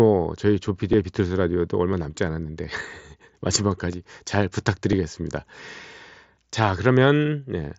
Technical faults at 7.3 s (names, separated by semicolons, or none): concealed Bluetooth headset packet loss